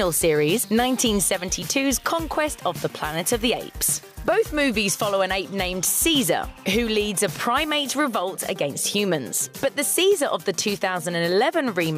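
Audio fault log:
Nothing to log here, as there's no fault to be heard anywhere in this clip.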